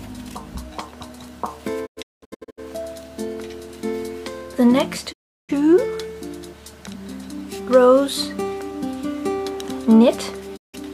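Short holes break the sound at 1.85 to 2.60 s, as a cluster of gaps, the longest 0.19 s, and again as single silences at 5.12 to 5.51 s and 10.56 to 10.76 s, each entered with a quick 20 ms fade. This is a digital broadcast dropout: the receiver muted while frames failed, losing that audio.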